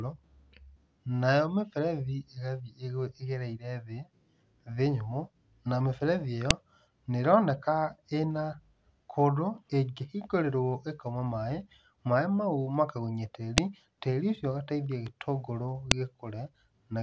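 A sharp, loud click cuts through the speech at 6.51 s, between "nyũmũ nayo mĩberethi ĩyo" and "nĩ ĩroneka ĩna". Another snaps at 13.58 s, just before "tĩri ũcio ũgateithia itũngũrũ", and a third at 15.91 s, right after it. Each is a file header played as audio. The header bytes of a joined piece were left in and play as samples.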